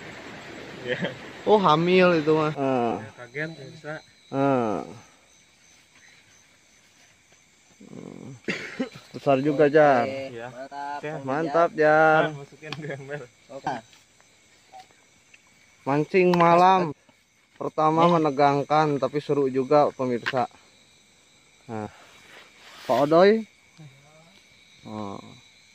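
The audio has five short blips from damaged data in a compressed stream, at 2.90 s, 10.66–10.68 s, 13.66 s, 16.91–16.93 s and 21.85–21.87 s. Each is a quick glitch of about 20 ms or less where the decoder hits bad frames, loses sync and hunts for the next header.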